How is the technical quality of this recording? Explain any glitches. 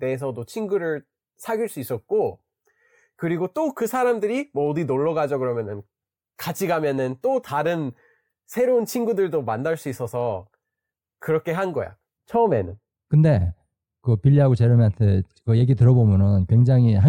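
The recording has one technical fault, a loss of treble in the closing stretch. De-emphasis applied wrongly, from 12.17 s to the end: a treble-cut filter, meant only to reverse a matching high-frequency boost, was run on audio that either never had that boost or had already been corrected. The response falls away smoothly toward the top, ending up about 11 dB lower at 10 kHz than at 1 kHz, so the speech turns dull and muffled.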